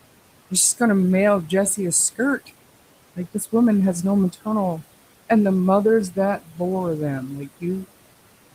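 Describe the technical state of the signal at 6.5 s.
At 6.5 s you're right inside a stretch, 6.43 to 6.6 s, where the noise suppressor cut into the speech. It mistook part of the speech for noise and pulled it down by as much as about 15 dB, so for roughly a sixth of a second the sound goes faint and swallowed.

Under that, the noise suppressor artifacts running through the whole clip are still present. The suppressor is pushing the steady room noise down by about 18 dB frame by frame, so the residue sinks and swells with the speech.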